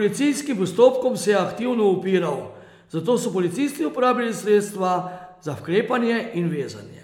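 Nothing stood out on listening to this recording of speech.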